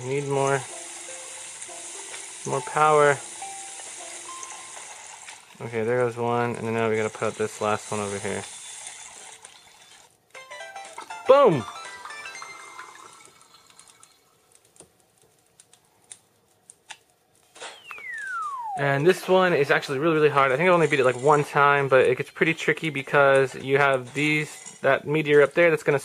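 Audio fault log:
4.44 s and 23.10 s, dropped buffer (overrun): jumps where the sound skips ahead by a few milliseconds with no silent gap, likely from samples overwritten before being read.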